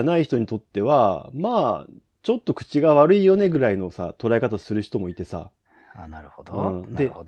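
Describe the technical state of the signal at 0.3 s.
At 0.33 s there is a brief rougher, noisier patch in the speech with no gap. This is a lost packet rebuilt from error correction: one 20 ms packet went missing, and the Opus decoder filled it from the lower-bitrate copy carried in the next packet.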